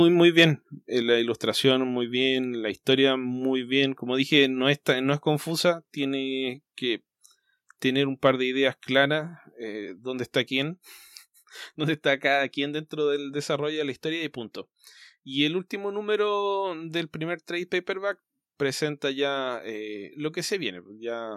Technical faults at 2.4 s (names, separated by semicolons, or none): none